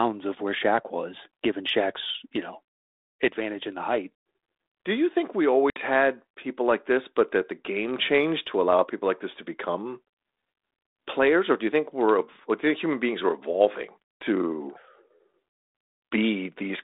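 At 5.7 s, packet loss on an ADPCM call cuts a hard-edged silent hole of about 60 ms, a few packets' worth, into the speech carried over 32 kbit/s G.726 with a 250 Hz to 3.7 kHz line band. Unlike a plain dropout, the speech returns slightly distorted and settles within some tens of milliseconds, because the decoder's adaptive predictor and step size fell out of step with the sender's.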